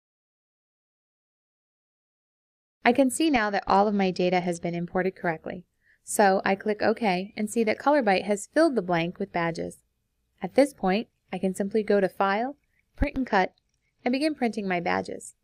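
From 3.26 to 4.77 s and again from 13.27 to 14.12 s, a Bluetooth SBC bit pool drop starves the upper sub-bands and coarsens quantisation, dulling treble and adding gritty noise. The sound fits a fall from bit pool 28 to 10, about 84 kbps.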